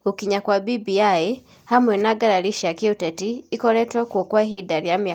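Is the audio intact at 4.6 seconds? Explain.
No. A burst of packet loss runs from 4.51 to 4.59 s, ending right at the moment in question. Several consecutive packets never arrived in time, so the receiver bridged the hole by extending the last good sound for about 60 ms while fading it down. That fill comes across as a brief held, fading continuation of the last sound instead of fresh speech, and when playback resumes near 4.6 s, about 60 ms of the original speech has been skipped.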